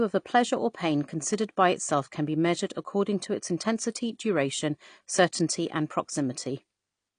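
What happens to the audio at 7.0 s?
At 7.0 s the speech is still running through heavy lossy coding, likely AAC compression at a low bitrate around 32 kbps, as it is for the whole clip. The encoder discards everything above 9.8 kHz, leaving the sound dull and smeared, with plainly audible codec damage.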